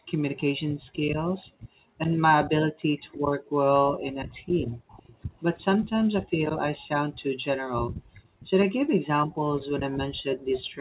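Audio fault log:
0.00–5.31 s, 6.28–6.39 s and 7.31–10.81 s, background gated by the echo canceller: the room sound dips or vanishes, by about 40 dB at its deepest, for roughly two seconds in total in the first span. The canceller clamps the microphone while the far-end loudspeaker plays, then releases it.
2.16–3.01 s, 4.88–5.90 s and 8.14–8.20 s, echo leak: a faint delayed copy of the speech trails the original by 332 ms, at about 30 to 35 dB below it. This is likely loudspeaker sound that the far side's echo canceller failed to remove and sent back.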